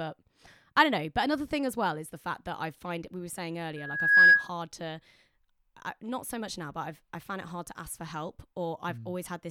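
At 3.76 s, just after "find we were saying", the microphone picked up its own loudspeaker and the loop gain exceeded one near 1.7 kHz. The resulting loudspeaker feedback squeal swells within half a second into a piercing tone about 15 dB above the speech, ending at 4.50 s.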